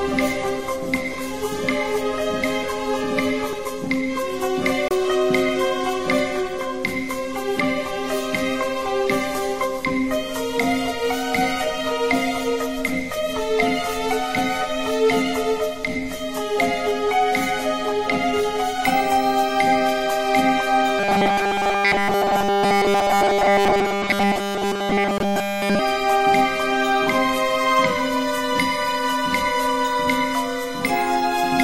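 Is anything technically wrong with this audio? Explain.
Yes, there are two kinds of fault. Bluetooth stall, 4.88 to 4.91 s and 25.18 to 25.20 s: sound cuts to silence for 26 ms, then 20 ms, likely from interference delaying packets until the buffer emptied.

Robotic sound from repeated short buffers, 20.99 to 25.80 s: essentially all of the audio is replaced by repeated snippets, likely about 5 ms long, forcing a rigid, metallic 200 Hz buzz.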